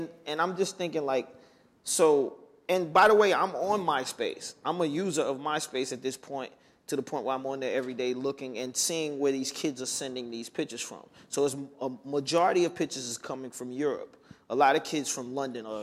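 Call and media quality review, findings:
Nothing stood out on listening to this clip.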